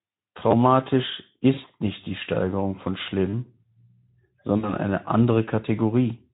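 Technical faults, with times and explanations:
0.51–0.53 s and 2.04–2.06 s, repeated buffer: each spot gives a brief buzzy click as one short slice plays three times in a row with hard joins, a roughly 100 Hz repeat. The output device ran dry and replayed its last block, which fits a 10 ms buffer, skipping about 20 ms of audio.
1.53–1.72 s and 4.58–4.77 s, VoIP packet loss concealed by the speech codec: the speech smears into a hoarse, buzzy tone that fades, then sounds thin for a moment before recovering. About 60 ms of packets went missing each time, consistent with three 20 ms frames. In the first, the loss is scattered over 160 ms, with a longest gap of 40 ms. The Speex decoder filled each gap from its last pitch and filter at falling gain. Its state then took time to rebuild once packets resumed.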